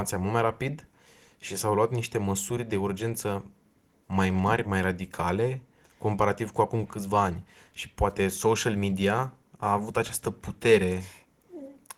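There are no technical faults to describe in time order in this speech.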